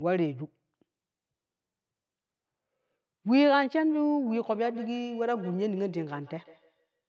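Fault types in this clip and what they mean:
Feedback echo between two devices: a nearby device on the call replays this mic, which hears it again, so from 4.27 s sound repeats roughly every 150 ms, about 19 dB down.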